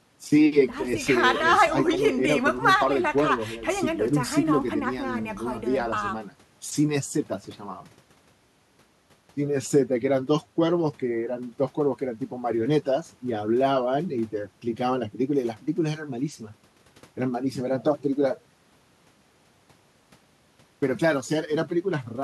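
No technical faults are audible.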